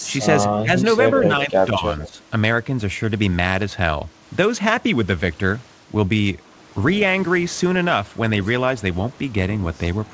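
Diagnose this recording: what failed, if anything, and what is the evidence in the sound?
The failure sits in call processing: speech suppressed in double talk. The speech level dips twice, from 0.53 to 0.76 s by roughly 10 dB, then more shallowly, around 5 dB, in patches between 1.02 and 2.11 s. The likely cause is the echo canceller being unable to separate the near talker from loudspeaker echo while both ends spoke, and turning everything down. The G.722 call path itself carries the audio with nothing above 8 kHz.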